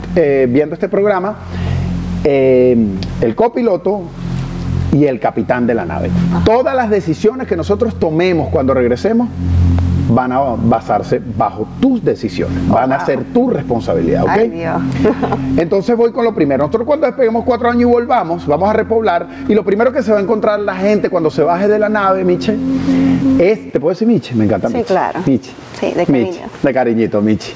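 Right from the start and all the way through, there's gain pumping: the gain keeps getting pulled down on every loud sound, swinging by something like 25 dB. Loud and quiet parts end up squashed close together. That's likely the input gain set way too high with a fast limiter or compressor clamping it down each time. The call microphone processing's bandwidth tops out around 8 kHz.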